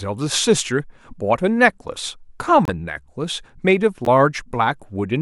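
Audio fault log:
2.65–2.69 s and 4.05–4.08 s, corrupt frame decoded: damaged compressed data is played as if valid, briefly placing energy at the wrong frequencies. The result is a short chirp, squeak, blip or burst of noise spanning roughly two frames, then one. Unlike a dropout or click, the event is energy at the wrong frequencies, and the earlier one is louder.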